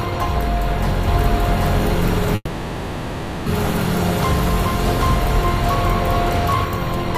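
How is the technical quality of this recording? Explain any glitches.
The recording has two glitches: a doubled audio track and a call audio freeze.

From 1.07 s to 6.65 s there is a doubled audio track. The likely cause is the audio being picked up a second time over a slower route, or an edit leaving two copies misaligned. A second full-band copy runs about 0.7 s behind the original at roughly the same loudness. It carries no reverb tail or room colouring, and it cuts in and out abruptly at those points.

From 2.35 s to 3.48 s there is a call audio freeze. Packets were likely delayed in transit, letting the jitter buffer run dry. The receiver filled the 1.11 s gap by stretching the last sound into a fading buzz or hiss, with only about 30 ms of true silence. When the packets arrived, the audio resumed where it had stopped, so nothing was lost, but everything after it lands about 1.11 s later than it should.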